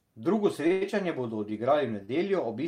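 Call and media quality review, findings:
Short stall from a late packet, 0.67–0.83 s: two back-to-back stalls, 30 ms then 89 ms, sound held and stretched with slight buzz or dip. Jitter buffer ran empty; receiver extended last audio until packets arrived, nothing lost, delay up about 120 ms total. Short stall from a late packet, 2.05–2.10 s: 31 ms hold, same jitter buffer underrun, resumed at same point, nothing missing, playout delay increased 31 ms.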